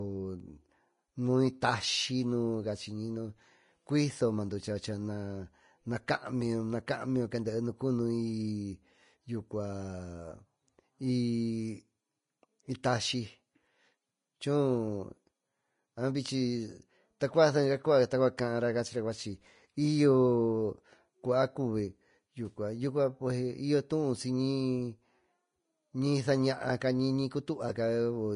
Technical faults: Vorbis compression; pre-echo

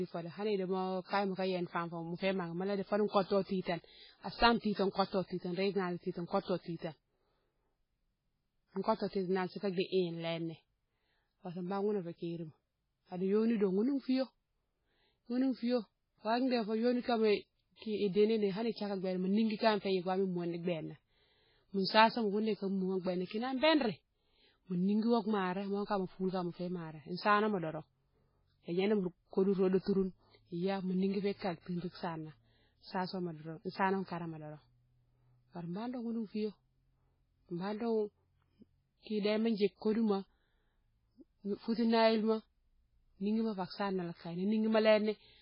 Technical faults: MP3 compression; pre-echo

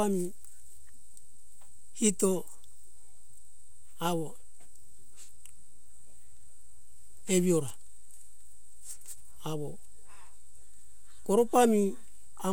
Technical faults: DC offset

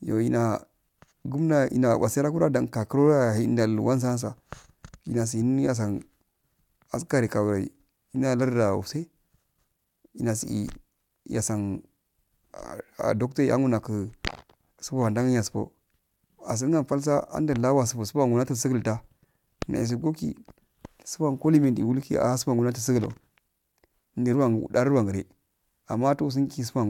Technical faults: none

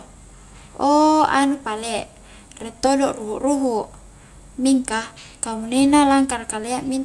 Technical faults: none

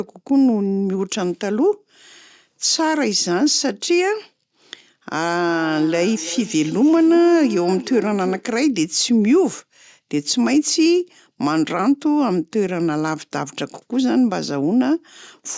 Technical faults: feedback echo between two devices

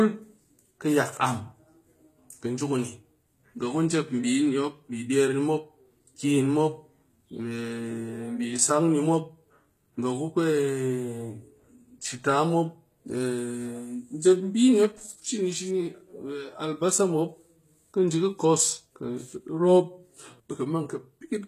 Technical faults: HE-AAC compression

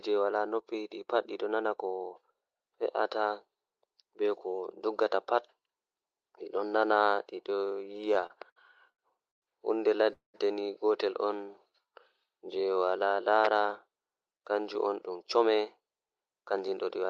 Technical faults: repeated stalls (stutter); call audio freeze; jitter buffer slow-down; jitter buffer speed-up

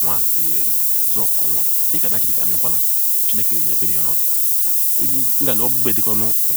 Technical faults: low bit depth with noise shaping

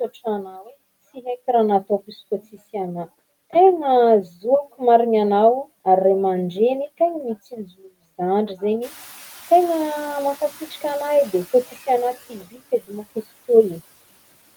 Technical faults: noise suppressor catching up

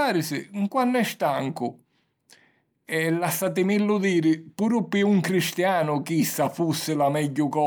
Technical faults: none

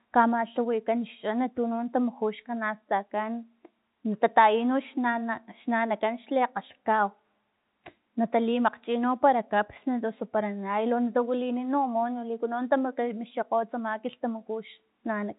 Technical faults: none

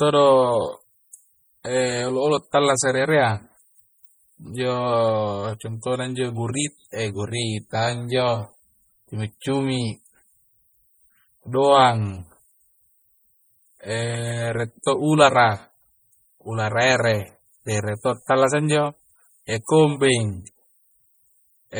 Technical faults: MP3 compression

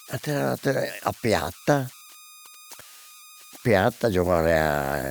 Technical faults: converter idle tones

